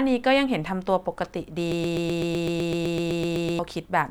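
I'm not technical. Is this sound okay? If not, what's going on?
No. Playback likely stalled, causing a broken-record loop: one 0.13-second scrap of speech repeats 15 times from 1.72 to 3.59 s, replacing what belonged there.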